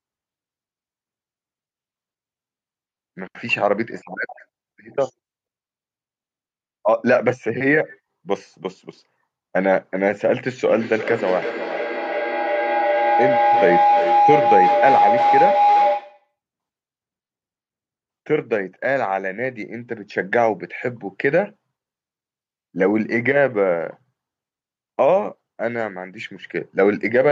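From 10.68 s to 16.33 s a tone near 700 Hz swells out of the speech, pulsing roughly every 0.4 s and peaking about 2 dB above the voice. This is feedback howl: a microphone-to-loudspeaker loop gains level each pass, narrowing to one favoured frequency.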